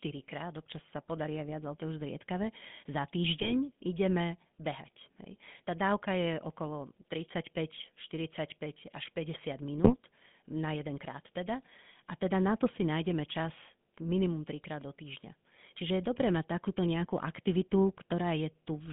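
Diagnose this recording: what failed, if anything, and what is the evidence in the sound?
The whole clip went through the GSM full-rate codec, so this is a codec-stage problem. The speech sounds buzzy and gravelly, confined to roughly 150 Hz to 3.5 kHz. The pulse-driven vocal-tract model discards fine excitation detail, which fits a 13 kbps full-rate stream.

There are also GSM bit errors on the radio link, heard as squawks and gargling from 3.40 to 3.53 s and again from 9.84 to 9.96 s. Corrupted filter, pitch or gain values warped a few consecutive frames, consistent with an error rate near 2%.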